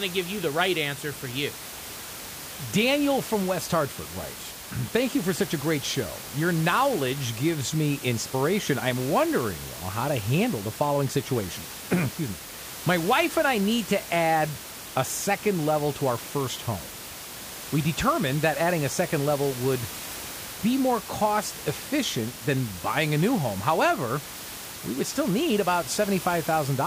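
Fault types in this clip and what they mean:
No faults can be heard.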